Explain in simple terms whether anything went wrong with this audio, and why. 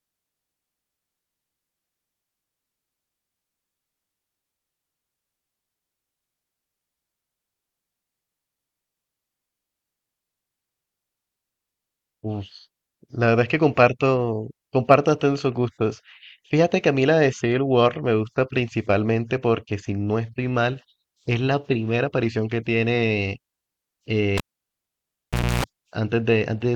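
A cable carrying the signal was pulled out and plugged back in while the recording was running, a fault called cable pulled and plugged in. At 24.37 s there is a pop as the connection breaks, then about 1.2 seconds of near silence. As the plug goes back in, only its tip touches first, so a 60 Hz mains buzz comes through for about 0.29 s. A second pop follows at 25.64 s as the sound returns.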